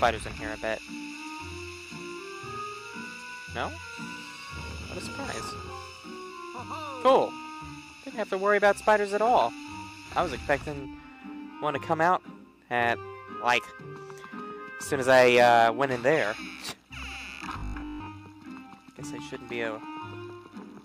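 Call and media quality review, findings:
Rigid metallic buzz at 50 Hz, 17.58–18.08 s; robotic sound from repeated short buffers, likely starved jitter buffer looping ~20 ms chunks, most of the audio in the span skipped.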